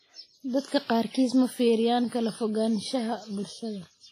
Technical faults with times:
0.00-4.12 WMA compression

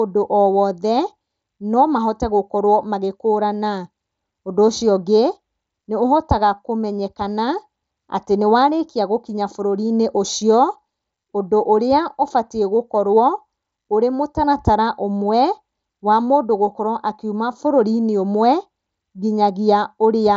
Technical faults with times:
0.00-20.37 channel delay (comb filtering)

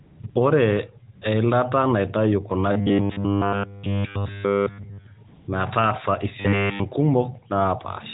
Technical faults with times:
0.00-0.36 AMR comfort noise
1.16-1.22 AMR comfort noise
2.72-5.06 robotic sound from repeated short buffers
5.28-5.48 AMR comfort noise
6.40-6.80 robotic sound from repeated short buffers

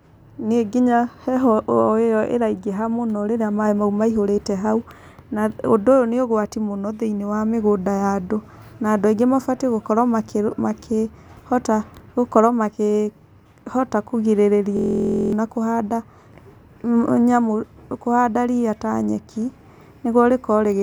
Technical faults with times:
14.77-15.33 system hang loop

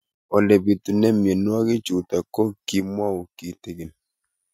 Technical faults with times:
2.80-3.85 one channel drops out

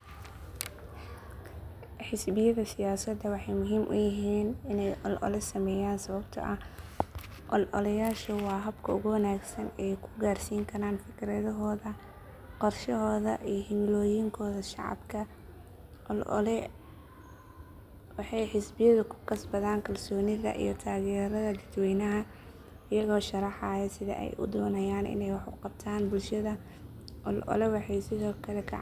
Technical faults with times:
none

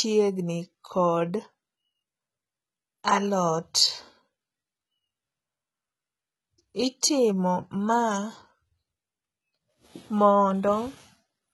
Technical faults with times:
0.00-11.53 HE-AAC compression
7.01 pre-echo

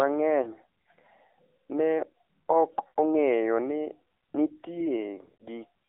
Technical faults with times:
0.00-5.88 AMR narrowband mobile codec
0.42-0.51 lost AMR speech frames
2.88-2.99 lost AMR speech frames
5.24-5.43 lost AMR speech frames

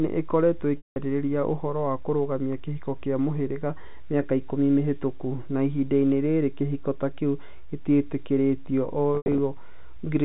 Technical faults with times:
0.77-0.96 packet loss with pitch repetition
9.15-9.38 packet loss with pitch repetition

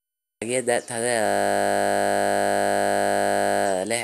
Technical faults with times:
1.26-3.66 system hang loop

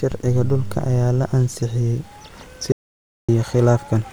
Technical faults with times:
2.72-3.29 audio dropout to silence

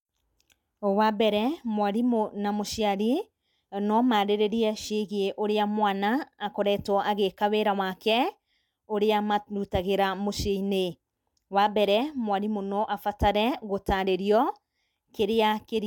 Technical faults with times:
none

